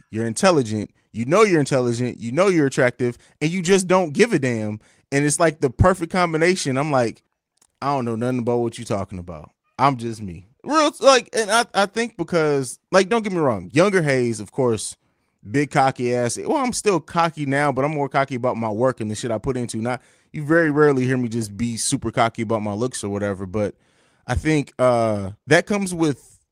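At 3.65–3.75 s, 10.07–10.09 s and 20.53–20.71 s the speech turns briefly rougher and noisier without ever dropping out. This is a lost packet rebuilt from error correction: the decoder played the low-bitrate copy carried in the following packet. The spans fit roughly three, one and five lost packets. Unlike packet-loss concealment, there is no gap, buzzy repetition or smeared fade. The real sound continues, only coarser.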